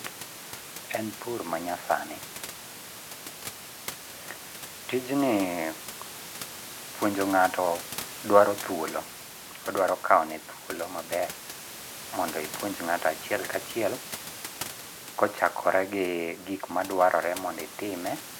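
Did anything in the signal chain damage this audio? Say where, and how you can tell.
No, nothing in the chain seems to have damaged this speech; the only extra sound is the room's own background noise, sitting about 30 dB and about 17 dB below the voice, which is part of the recording.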